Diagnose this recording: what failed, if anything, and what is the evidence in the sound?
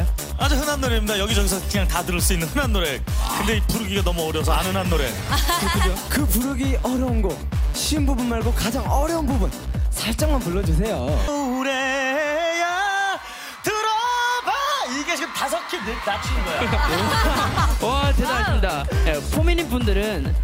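Thin, bright and sibilant from 0.0 to 6.44 s, with treble about 8 dB hot at 10 kHz: pre-emphasis left on, matching the CD 50/15 µs curve, with de-emphasis skipped at playback.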